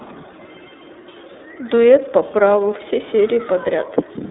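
The speech in this clip has passed through the iLBC codec for its whole length, and the coding damage is plainly audible as a rough, slightly synthetic edge on the voice. The sound is confined to a telephone band of roughly 200 Hz to 3.7 kHz, with nothing above 3.8 kHz. That fits iLBC's 30 ms frame mode at about 13.3 kbps, where each frame's excitation is coded independently. On a spectrogram the energy stops at a hard ceiling near 3.8 kHz and the lowest frequencies are thin.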